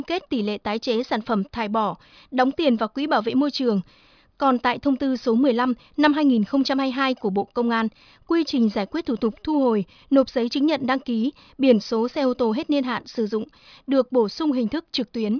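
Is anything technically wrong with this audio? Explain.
No, nothing technically wrong turns up anywhere in this speech recording.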